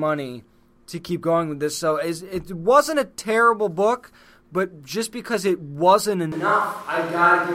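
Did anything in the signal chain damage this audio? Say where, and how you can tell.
Yes. From 6.32 s, right after "just because it wasn't", the sound turns abruptly roomy and hollow, with thinner bass and room noise rising to roughly 25 dB below the speech, and it stays that way to the end. The level barely changes, so this is a change of pickup rather than a gain drop. The likely cause is a switch to a distant microphone at the capture stage, after the close microphone's feed dropped out of the analogue chain.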